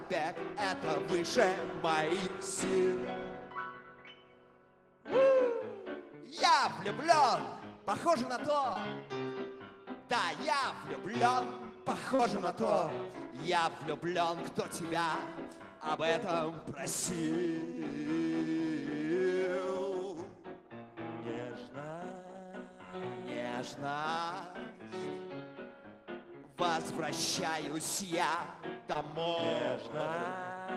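Short concealed packet loss occurs at 8.73 to 8.77 s, 12.15 to 12.21 s and 28.93 to 28.97 s. About 20, 40 and 20 ms of audio never arrived, and the receiver extended the preceding sound to fill each gap, leaving a brief smear or wobble.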